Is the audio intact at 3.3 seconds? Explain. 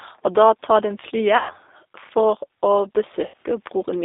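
No. From 3.28 to 3.34 s, VoIP packet loss is concealed by the speech codec. About 60 ms is missing, which fits three lost packets. The decoder stretches its last pitch and filter into a fading buzzy tone or coloured noise, leaving the sound weak just afterwards. Underneath, G.729 coding limits the band to about 300 Hz–3.7 kHz and gives a plainly rough, synthetic texture.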